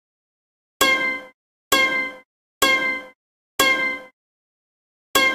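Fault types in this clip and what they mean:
No faults are audible in this recording of sounds.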